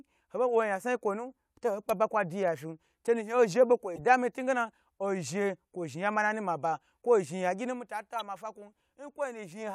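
Speech, with corrupt frame decoded glitches at 3.96–4.01 s and 8.16–8.21 s. The damaged frames played as quiet chirps, squeaks, blips or bursts of noise around -30 dBFS from misplaced energy, showing as short, off-pattern spectrogram smears spanning a few frames.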